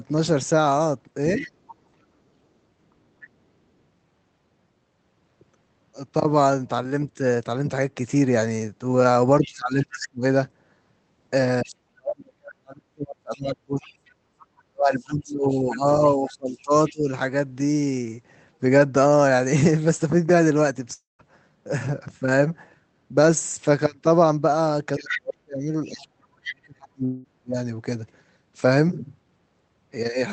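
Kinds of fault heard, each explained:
speech suppressed in double talk: The talker's level drops in chunks while the far side is also speaking. At 1.36 s there is only a brief dip of about 5 dB, lasting roughly a tenth of a second. From 9.42 to 17.09 s and from 24.98 to 27.57 s, several seconds in total are pushed down by as much as about 40 dB. This is likely an echo canceller that could not separate the talker from loudspeaker echo and turned both down. On a waveform the envelope collapses in pieces; on a spectrogram the talker's bands thin out, upper harmonics first, then vanish in patches.
other side's voice leaking through: A second, fainter voice runs under the talker at 1.37–1.73 s, 9.44–9.97 s, 11.67–11.75 s, 13.34–16.92 s and 24.98–26.56 s. It sits about 25 to 10 dB below the talker and is loudest in the final stretch. This is likely loudspeaker playback that the echo canceller left in the microphone signal. 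A spectrogram shows faint, separate harmonic stripes beneath or between the talker's, and the waveform shows low-level ripples filling the talker's pauses.
long network dropout: At 20.93 s about 260 ms of audio never arrives. The receiver carries the last sound on as a fading buzz for a short while, then leaves about 160 ms of silence before the stream resumes further on, with that section gone. At 27.05 s about 200 ms is missing, and the fill covers almost all of it with no silent gap. The likely cause is packets lost or held up in transit. On a spectrogram the harmonics smear flat and fade, sometimes ending in a blank column. The waveform shows a decaying tail, then a flat line.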